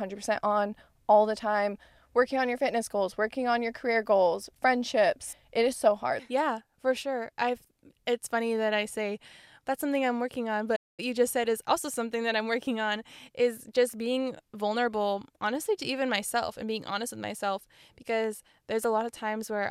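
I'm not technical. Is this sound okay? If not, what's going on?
No. At 10.75 s, right after "something I'm working on", the speech suddenly goes silent for about 0.22 s, then continues with "you just said is". That's a playback stall, likely the player briefly running out of audio to play. It sounds like a sudden gap of silence.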